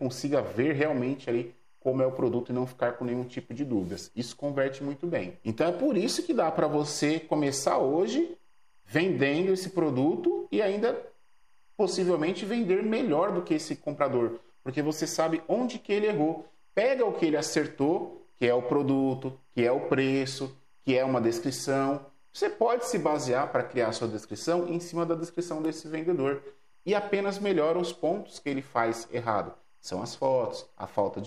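Timecode bleed runs throughout: linear timecode leaking in from a neighbouring line, a faint chirping warble near 1 and 2 kHz that flips between two pitches rather than holding one steady whine.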